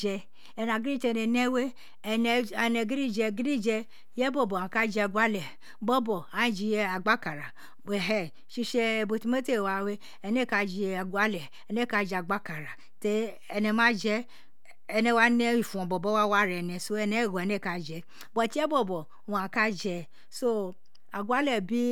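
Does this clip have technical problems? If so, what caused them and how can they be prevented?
Yes. The speech carries a DC offset for its full length, with the waveform displaced from zero by a constant of about -42 dBFS. It is inaudible in itself but occupies headroom and appears as steady energy at 0 Hz. Prevent it with a DC-blocking high-pass filter in the recording chain.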